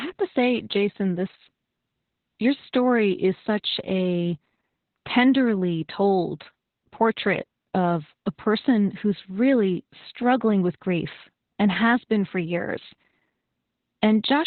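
Opus voice compression affects the whole speech clip. Nothing is present above about 4.2 kHz, a narrowband cut-off that points to the SILK linear-prediction coder running at a very low rate, consistent with roughly 8 kbps. With so few bits, the excitation signal is coded coarsely, so the speech sounds muffled, hoarse and slightly robotic, with heavy codec damage throughout.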